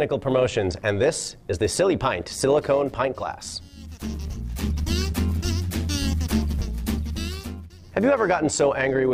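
Overlap-add ripple runs through the whole clip: the level rises and falls by about 6 dB around 100 times a second, giving the audio a metallic buzz. The frames were rejoined with windows whose overlap doesn't sum to constant gain, so every frame hop imposes another dip.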